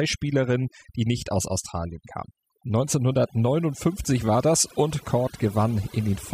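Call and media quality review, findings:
Overdone noise removal, throughout: background drops and breaks up into twinkling specks; speech loses quiet detail as bands near the noise estimate, including quiet speech detail, are cut.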